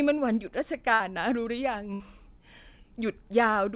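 At 0.94 to 1.02 s and again at 1.94 to 2.02 s, bursts of packet loss drop about 60 ms. Concealment holds and fades the last sound as a smeared, flat band before speech abruptly resumes, all below 4 kHz.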